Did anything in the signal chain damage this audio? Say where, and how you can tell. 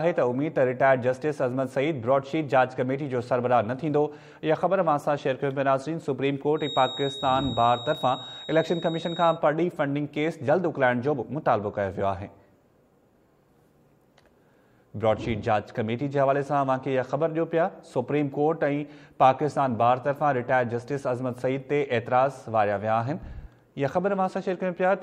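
Yes: a 3.8 kHz feedback whistle from 6.54 to 9.41 s, about 15 dB down, likely from a speaker-to-microphone acoustic loop. Its wavering level sets it apart from steady electrical tones.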